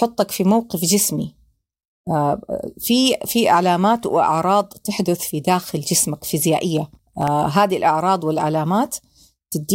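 At 6.77 s the speech picks up a burst of processor overload crackle that runs until about 7.28 s. The processing couldn't keep up with its very short buffers, well under a millisecond each, and missed around ten deadlines in that half second. Each miss drops in a tiny hard-edged gap of silence, so you hear a gritty, tearing crackle riding over the speech that clears once the load eases.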